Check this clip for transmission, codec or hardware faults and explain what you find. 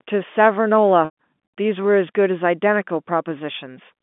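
One transmission fault: packet loss with pitch repetition, from 1.05 to 1.15 s. About 120 ms of audio went missing, which fits four lost packets. The receiver repeated the last pitch period and faded it out, so the speech holds briefly with a buzzy tone, sinks into silence, then cross-fades back. The G.711 telephone band, roughly 200 Hz to 3.5 kHz, stays audible throughout.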